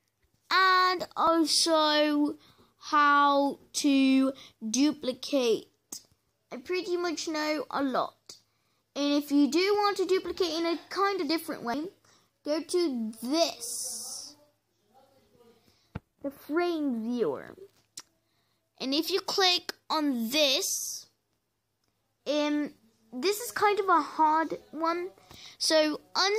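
Damaged data in a compressed stream shows up at 0.93 s as a brief glitch. A corrupted stretch of the encoded file makes the decoder misread the frames there and lose sync, so it emits garbage for a moment while hunting for the next valid frame header.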